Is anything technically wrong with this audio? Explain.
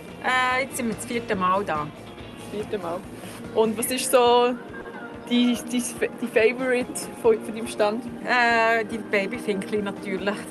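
Yes. Clock drift between sender and receiver runs through the whole clip. The sender's clock is about 2 percent slow, so the receiver's jitter buffer keeps draining.

Repeated timing corrections occur from 0.07 to 10.29 s. To compensate, the receiver repeatedly stretches short pieces, adding roughly a fifth of a second in total. The playback runs at about 98 percent speed, with the edits unevenly spaced.

A short stall from a late packet occurs at 4.81 to 4.86 s. The buffer ran empty, so the receiver held the last sound for 40 ms until the packet arrived. Nothing is lost, but there is a brief held moment with a slight buzz or dip.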